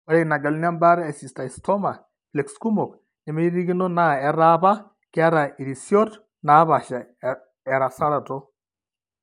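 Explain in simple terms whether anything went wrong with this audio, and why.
Between 6.93 and 8.43 s, imaging from linear upsampling: the speech was stretched to a higher sample rate crudely, dulling its top end and adding a faint metallic shimmer on hissy sounds.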